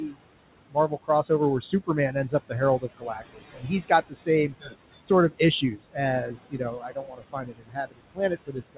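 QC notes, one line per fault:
Throughout: noise suppressor artifacts. The suppressor pulls the room noise down by about 21 dB frame by frame, so it sinks in gaps and rises under speech, leaving a residue. A spectrogram shows the noise floor pumping between dark gaps and patchy speech regions, all below 4 kHz on this narrowband G.711 path.
0.01–0.19 s, 0.69–1.3 s, 1.61–8.77 s: speech cut by the noise suppressor. Quieter speech was mistaken for noise and dropped by up to about 22 dB, roughly 150 ms in the first stretch and 200 ms in the second, so parts of the speech sound swallowed. The waveform shows dips in the envelope, and the spectrogram shows missing speech energy.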